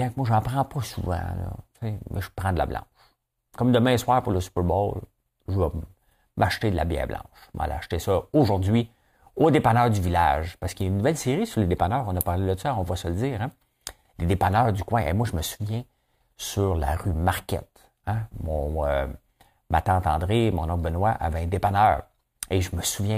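No technical fault can be heard anywhere in this speech recording.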